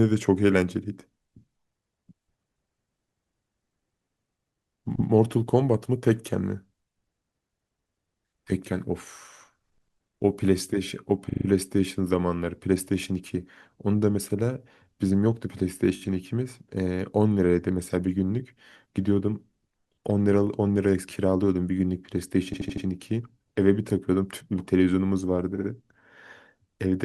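Repeated frames stutter the speech at 4.95 s (a 120 ms block played twice), 11.29 s (40 ms, five plays), 15.95 s (20 ms, four plays), 22.53 s (80 ms, five plays) and 25.55 s (60 ms, three plays). Duplicated compressed frames replay audio, lengthening the clip.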